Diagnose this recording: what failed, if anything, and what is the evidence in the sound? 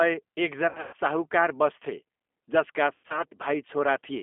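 The codec stage failed throughout. The sound is confined to roughly 250 Hz to 3.5 kHz and has a rough, synthetic edge. That fits G.729 at 8 kbit/s, which rebuilds speech from a vocal-tract filter, pitch prediction and sparse pulses.

The network stage shows VoIP packet loss concealed by the speech codec, from 0.69 to 0.95 s and from 2.94 to 3.23 s, just after "बस्थे जसका". The sound smears into fading buzz. About 200 ms and 140 ms were lost, with runs up to 120 ms. The decoder extrapolated while the gain decayed.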